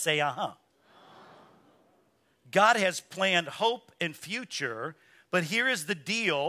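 Nothing technical stands out in this short bit of speech; there's no fault to point to anywhere in it.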